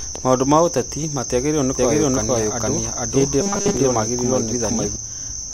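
At 1.78 s a doubled audio track begins: a second, full-band copy of the speech enters abruptly, trailing the original by roughly half a second and at about the same level. It carries no decay or room colouring, so it reads as a flat overlapping echo rather than reverberation, and it cuts off just as suddenly at 4.96 s. The likely cause is the same signal being captured a second time through a slower path.

Within that stretch, from 3.41 to 3.77 s, the speech turns into a rigid, metallic buzz at a fixed 200 Hz that only loosely tracks the syllables. This is robotic sound from repeated short buffers. A 200 Hz pitch corresponds to a repeated segment of about 5 ms. Most of the real audio in this span is skipped, and the likely cause is new audio arriving too seldom, with the last short buffer replayed to fill the gaps.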